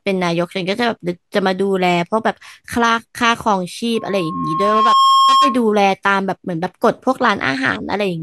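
From 3.95 s to 5.66 s a single 1.1 kHz tone swells over about a second until it sits roughly 5 dB above the speech. This is loudspeaker feedback squeal: the microphone picks up its own loudspeaker, and at that frequency the loop's gain exceeds one.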